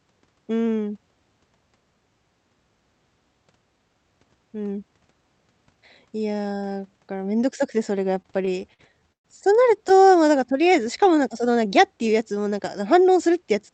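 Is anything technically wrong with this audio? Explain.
Yes, two playback faults in the speech, both from a WebRTC call path whose output cuts off near 8 kHz.

From 8.15 to 9.26 s, repeated stalls (stutter): late packets emptied the jitter buffer nine times, the longest gap 123 ms, so the sound is held and stuttering.

From 10.05 to 11.53 s, a jitter buffer slow-down: repeated pitch periods add 98 ms, so playback runs at 94% speed, drawn out at unchanged pitch.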